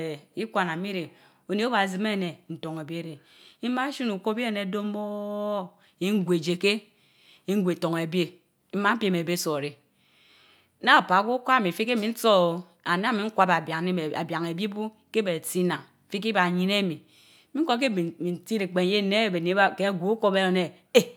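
Nothing in the recording stands out as a technical fault, so there's no problem here to point to.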